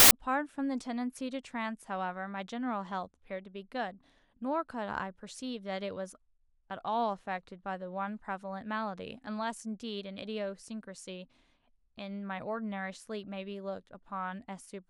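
A speech recording opens with a hard-edged burst of very loud white noise from 0.00 to 0.11 s, a case of file tags played as audio: an embedded cover picture's compressed data is being decoded as samples.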